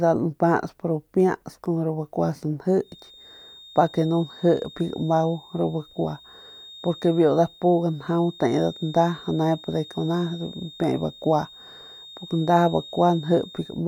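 From 2.78 s onward, a thin feedback whistle at 3.7 kHz sits well under the speech, likely from a near-feedback loop; unlike howl, it never builds up, only swelling and fading slowly.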